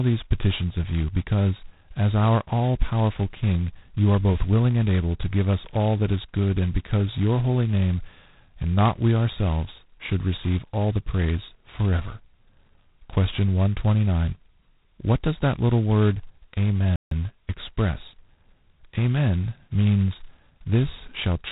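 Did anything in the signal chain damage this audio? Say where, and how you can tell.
Yes. G.726 ADPCM at the codec stage, throughout: nothing passes above 4 kHz, and a harsh, rasping hiss tracks the speech level, which fits heavy 16 kbit/s coding.

Playback stall, 16.96 to 17.11 s: the speech drops to silence for about 0.15 s, likely because the player's buffer ran dry or its thread blocked.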